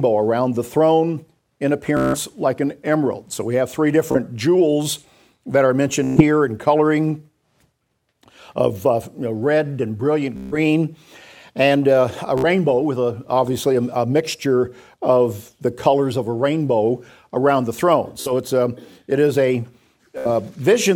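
A rapid, buzzing stutter breaks the sound seven times, at about 1.97, 4.12, 6.04, 10.37, 12.38, 18.21 and 20.18 s, each lasting roughly 30 to 170 ms, longest near 1.97 and 10.37 s. This is Bluetooth stutter: audio packets arrived late or not at all, so the receiver kept replaying its last short buffer, giving the machine-gun repeat. When data resumed, the sound picked up further along, with the missing stretch gone.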